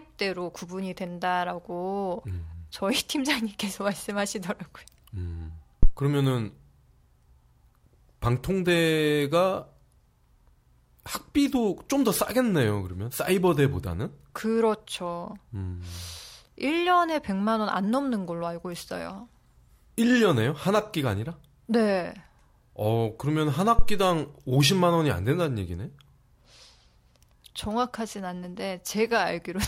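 At 5.83 to 5.88 s and again at 23.79 to 24.07 s, a phantom power thump cuts into the speech. A supply switching on a live input sends a DC step through the coupling capacitors, producing a deep thud peaking at about -7 dBFS and dying away within 11 ms and 64 ms respectively. On the waveform each appears as a sudden one-sided excursion with an exponential tail. A spectrogram shows a dark low-frequency blotch.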